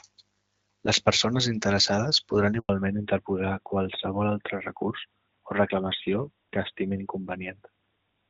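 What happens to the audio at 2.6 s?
A handover gap runs from 2.59 to 2.69 s: the call switches networks, no frames arrive, and the speech drops to silence for 100 ms before the new link resumes. From 2.69 s to the end, a fallback to narrowband leaves nothing above 4 kHz. The speech turns duller and rougher than the clear HD Voice before it, consistent with a switch from AMR-WB to AMR-NB.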